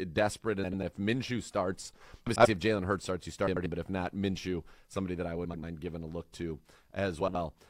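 Five spots carry frames out of order: 0.63 to 0.83 s, 2.26 to 2.46 s, 3.47 to 3.66 s after "starts you", 5.44 to 5.64 s after "somebody that I" (just before "giving a look to"), and 7.20 to 7.35 s after "giving a look to". In each, two adjacent blocks of about 93 ms (70 ms in the last) play swapped, which fits runs of four or three codec frames. The result is a brief garbled flutter. Unlike a dropout or stutter, nothing goes missing or repeats, and the timing stays intact.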